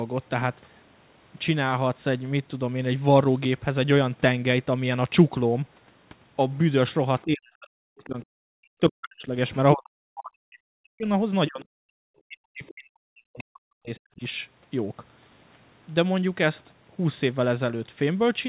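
Speech suppressed in double talk occurs at 7.24–9.37 s, 9.74–11.08 s, 11.47–11.66 s and 12.26–14.23 s. With both sides speaking, the echo canceller likely could not separate the talker from loudspeaker echo and turned both down. The speech sinks by around 40 dB, about 25 dB in the brief third stretch.

Other side's voice leaking through appears at 9.49–9.57 s, 12.68–12.73 s and 13.38–13.42 s. These are short scraps of a second voice sitting about 30 dB, then about 25 dB, below the speech, likely loudspeaker playback the echo canceller left in the microphone signal.

Background gated by the echo canceller happens at 11.94–11.98 s. While the loudspeaker was playing, the canceller clamped the microphone down hard, so the room sound drops by about 40 dB for roughly 40 ms before returning when the canceller releases.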